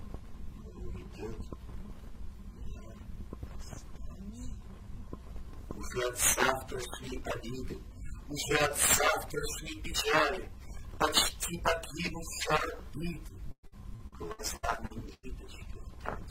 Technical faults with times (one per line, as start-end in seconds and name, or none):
13.51-15.25 repeated packet loss (robotic sound)